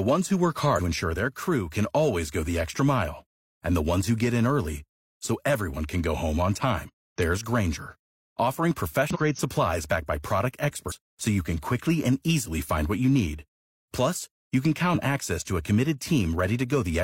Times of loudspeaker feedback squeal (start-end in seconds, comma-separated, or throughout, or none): none